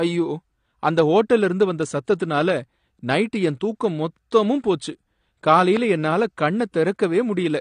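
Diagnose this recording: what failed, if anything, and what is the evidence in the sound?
The speech sounds dull and smeared throughout, with plainly audible coding damage and nothing above 9.8 kHz. The likely cause is the codec stage: lossy AAC-LC compression at a low bitrate, which fits something around 32 kbps. With too few bits, the encoder lowers its cut-off and quantises the remaining frequency lines coarsely against its hearing model. That removes the top octave and blurs detail in the speech that remains.

A single loud pop occurs from 5.77 to 5.79 s, about 10 dB above the surrounding speech, and the speech carries on underneath it. Its likely origin is a sudden voltage step or pulse added to the signal, from a plug, a switch, static discharge or a driver glitch. The pulse sums with the audio and passes through the following stages as one sharp transient.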